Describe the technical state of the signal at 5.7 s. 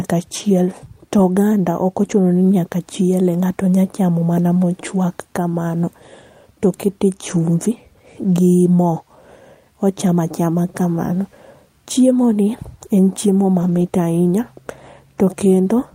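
At 5.7 s the speech signal is intact, with no dropout, clipping, glitch or other technical fault audible at that moment.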